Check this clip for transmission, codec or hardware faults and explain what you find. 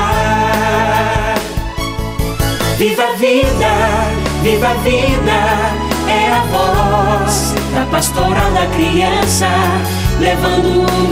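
Nothing in the clip points to a transmission, codec or hardware fault. No dropouts, glitches or other disturbances interrupt the sound at any point.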